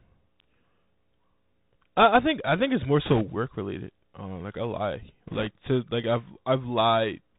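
The whole recording passes through a Bluetooth CVSD headset codec, and its damage is plainly audible. The coder sends one up-or-down bit per sample, consistent with a 64 kbps CVSD stream, and its adaptive step cannot keep pace with loud, sharp sounds. Sibilants turn scratchy, fast transients smear, and a granular hiss sits beneath the speech. On a spectrogram, everything stops at a hard ceiling near 4 kHz, with a grainy noise floor filling the gaps between syllables.

The first burst of bit errors on a Bluetooth voice link begins at 3.06 s, right after "I think it's more", and lasts until 3.22 s. Flipped bits push the step-tracking off course, yet each bit moves the signal only slightly and the errors fade out, so no loud clicks result. Instead, a rushing crackle rides over the speech. The second burst runs from 5.27 to 5.47 s, between "like I lie" and "to like", and is milder, since its error rate is lower, only a couple of percent against a few percent the first time. 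In the waveform, both stretches appear as fuzzy, jittery thickening rather than sharp spikes. On the spectrogram, broadband speckle fills the band below 4 kHz.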